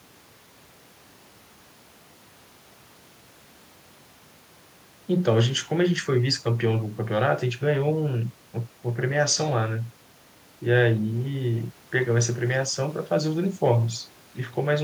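Nothing in the speech recording registers as a technical fault at any point.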